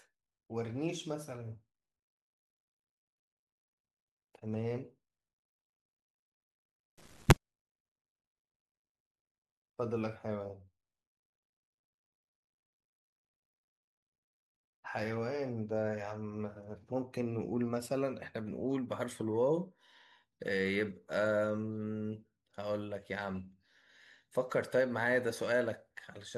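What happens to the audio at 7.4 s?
Just before that point, from 6.98 to 7.36 s, the reader assembles each sample from the wrong bytes, whether offset by one, in swapped order or on a misjudged alignment. The rapidly fluctuating low-order bits end up as the most significant part of every value, so the speech is replaced by a burst of loud, harsh broadband noise, close to white on the louder sounds. By 7.4 s that burst has just stopped.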